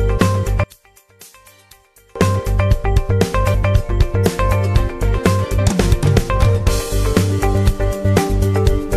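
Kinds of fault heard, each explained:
One channel inverted: from 0.64 to 2.16 s the sound drops by about 31 dB to a faint residue, likely because one stereo channel's polarity is reversed and the shared content cancels in mono. Unlike a dropout, a difference signal remains rather than silence.
Damaged data in a compressed stream: at 5.58 s a brief glitch occurs as the decoder misreads corrupted frames and resynchronises at the next frame header. Unlike a simple click, it comes from the decoder losing frame sync.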